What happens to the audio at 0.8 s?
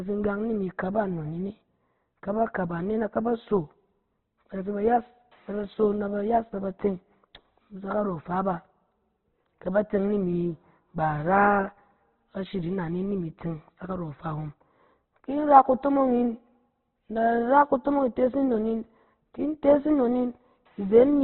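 At 0.8 s the speech carries the same damage heard throughout: likely Opus compression, with nothing above 4.2 kHz and heavy grainy, rough roughness rather than MP3-style swirling holes.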